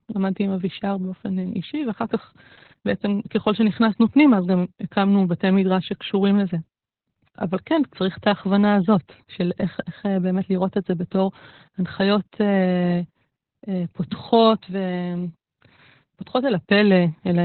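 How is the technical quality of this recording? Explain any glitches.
Technical quality is poor, limited by heavy low-bitrate voice coding. Throughout, Opus voice compression in narrowband SILK mode, consistent with about 8 kbps, removes everything above 4.4 kHz and coarsely codes the excitation, leaving speech muffled, hoarse and slightly robotic.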